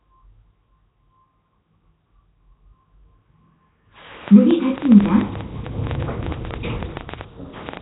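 From the start, the whole recording carries a rough, hissy halo and a smeared, underwater texture, with nothing at all above 3.9 kHz. This is heavy damage most likely from Nellymoser compression, the old Flash microphone codec, at a rate that points to around 16 kbps. Bands too weak to earn bits are filled with noise. On a spectrogram the energy ends in a hard ceiling near 3.9 kHz, and the area below looks blotchy and grainy instead of smooth.

From 4.28 s to 7.78 s a train of clicks ticks and pops over the sound, including its quieter moments. Roughly thirty similar pulses arrive at an uneven pace averaging about 8.9 per second, peaking well above the surrounding audio. The likely cause is interference from nearby equipment or a faulty connection or power supply. A waveform shows thin spikes at irregular spacing, and a spectrogram shows matching vertical lines running through the whole band below 3.9 kHz.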